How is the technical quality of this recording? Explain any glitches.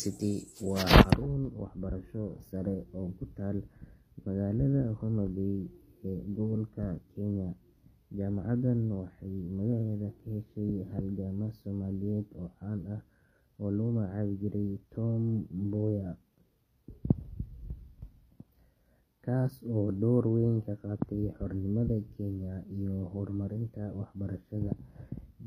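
The technical quality is limited by audible codec damage across the whole speech clip. The likely cause is HE-AAC compression, running the full length. The lower spectrum is coded directly. The treble is rebuilt by copying lower bands upward, and nothing remains above 14.9 kHz. The damage is plainly audible and fits a low bitrate near 24 kbps. The s sounds come out gritty, metallic or lispy.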